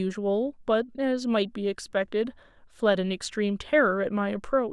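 No technical faults are audible.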